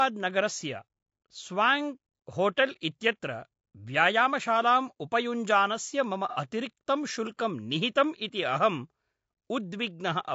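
Across the whole speech clip the voice has a rough, grainy texture, with noise filling the gaps between harmonics and a top band that sounds thin and partly synthetic. This is plainly audible codec damage, most likely from low-delay AAC compression (AAC-ELD) at a rate that fits about 32 kbps. Its very short frames resolve pitch harmonics poorly, which is why the voice turns grainy rather than swirly or watery as a longer-frame codec would at that rate.

Between 0.47 and 0.76 s come three small ticks, the longest lasting around a millisecond. They are CD scratch ticks: a blemish on the disc destroys more data than the error correction can rebuild on each rotation, so the player patches or mutes a tiny run of samples. Unlike codec grain, they are discrete and evenly spaced, arriving at a steady rotation rhythm instead of being spread through the sound.

From 6.29 to 6.37 s, after "व्यायामशालाम् उपयुञ्जानस्य मम" and before "अतिरिक्तं शुल्कं निहितम् इति", there is a smeared, noisy or phasey patch of about 60 ms, which points to a couple of lost frames. 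This is AAC frame loss with concealment: the decoder rebuilt the gap from the last good spectrum. Where a scratch leaves a sharp click, this leaves a brief blurred stretch with no clean edge.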